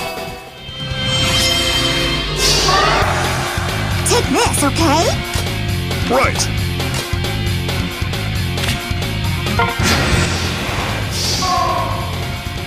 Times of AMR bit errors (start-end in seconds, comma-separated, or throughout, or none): none